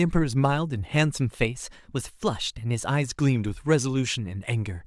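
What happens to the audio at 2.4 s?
At 2.4 s the speech sits inside a drift correction step that runs from 1.21 to 2.87 s. Playback jumps about 5.5% faster, raising the pitch by roughly 92 cents, nearly a semitone, before snapping back. This is likely a clock-matching routine abruptly changing rate to rebalance its buffer. On a spectrogram the harmonics step upward together and drop back at 2.87 s; the waveform's periods compress across that stretch.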